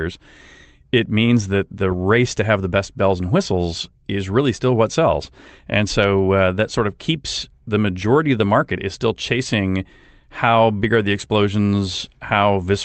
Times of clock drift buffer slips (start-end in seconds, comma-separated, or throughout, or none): none